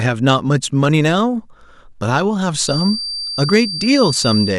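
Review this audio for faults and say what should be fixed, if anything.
Hard clipping flattens speech peaks at 0.27–0.33 s and 0.84–1.07 s (about 1 dB over, brief crackle) and at 3.53–4.29 s (about 4 dB over, harsh fuzz). Unlike soft saturation, the tops are cut abruptly, adding harsh high harmonics. Lower input gain to leave peak headroom.

A thin feedback whistle at 4.7 kHz runs from 2.59 s to the end, roughly 10 dB below the speech and wavering slightly, likely a loudspeaker-to-microphone loop held just short of runaway. That wavering sets it apart from a steady electrical tone. Reduce monitor gain or separate microphone and loudspeaker.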